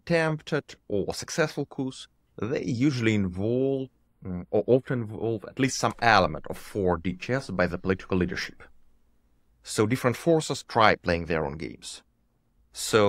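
From 4.07 to 5.64 s, one channel lags by a few samples before mono summing. This channel delay (comb filtering) notches around 7 kHz, leaving the speech dull and hollow.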